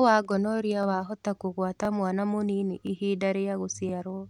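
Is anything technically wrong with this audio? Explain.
Yes. The speech has overlapping chunks, at 0.83–0.85, 1.85–1.87, 2.87–2.89 and 3.89–3.91 s. The audio was handled in 1.0 s chunks, and each chunk began 20 ms before the previous one ended. That 20 ms plays twice at every join. It is heard as a regular click or stutter, about once per second.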